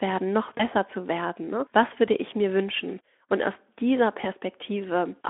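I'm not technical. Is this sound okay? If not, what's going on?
No, there are two short glitches of VoIP packet loss concealed by the speech codec: at 0.58 s, just before "zu werden", and at 4.21 s, after "aus dieser". A bit of speech went missing, and the phone-style codec briefly smeared in a buzzy or noisy, fading guess.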